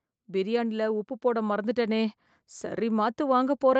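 From 0.25 s to the end of the clip, the speech and the background noise beneath it swell together, climbing steadily louder rather than jumping, so the room seems to creep closer along with the voice. This is automatic gain rising: the gain control judged the input too quiet and kept raising its gain over the remaining three and a half seconds, which lifts everything in the signal at once. The call path's bandwidth stops at 8 kHz, which fits an Opus stream around 32 kbps.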